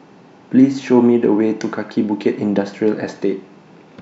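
Nothing in this speech recording stands out as a technical fault, so there's no problem moment to point to anywhere in it.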